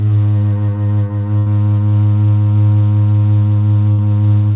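A music clip with two bursts of packet loss. At 1.38 to 1.48 s, the sound is held and fades for about 80 ms. At 3.92 to 4.00 s, the same happens for about 60 ms. In each, the receiver stretched the last audio it had across the missing packets. Playback then jumps ahead, so that stretch of music is gone. The whole clip stops at 4 kHz, which fits a narrowband call codec such as G.711.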